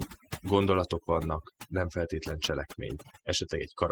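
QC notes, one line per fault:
throughout: overdone noise removal. The noise reduction was set too strong for this noisy recording. Any frequency band close to the tool's noise estimate gets pulled far down or switched off. Quiet parts of the speech sit near that estimate, so they get cut too. The background drops away and breaks into twinkling, warbling specks. These come from bands turning on and off from moment to moment. Speech and background suffer together.
throughout: Opus voice compression. The codec damage is plainly audible. It runs in hybrid mode. A linear-prediction coder handles the lower band. A transform layer codes content above 8 kHz. The band stays full width, with nothing above about 20.1 kHz. The sound points to a bitrate around 16 kbps. That is low for full bandwidth, so the excitation is coded coarsely. The codec works in 20 ms frames, and each frame carries its own coding errors.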